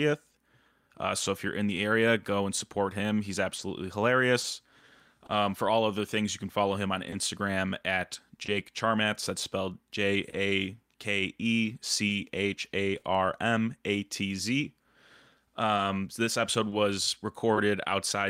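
Clock drift between sender and receiver runs through the whole speech recording. The sending side's clock runs slow, by roughly two percent, so the receiver's jitter buffer keeps draining and has to be topped up. Unlike a one-off dropout, this leaves small timing hiccups spread unevenly across the full length, a faint unsteadiness in pacing rather than any single audible break.

Scattered short gaps appear first between 0.31 and 5.31 s, with about seven brief holes, none longer than a few tens of milliseconds. They return between 7.10 and 13.05 s, again about seven, and between 15.76 and 17.58 s, about three. Each comes from a lost or late packet that the receiver covered by stretching the preceding sound, so it is heard as a tiny tick or smear. They are isolated rather than periodic, and only a few percent of each stretch is patched.

Repeated timing corrections run from 2.08 to 15.68 s. 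To keep pace with the slow sender, the receiver repeats short pieces again and again, always lengthening and never cutting, adding well under a tenth of a second overall. Playback speed stays at 100 percent, so there is no pitch shift. What separates these edits from the gap concealment is their one-way direction and link to the drift, heard, if at all, as a slightly halting tempo rather than smeared spots.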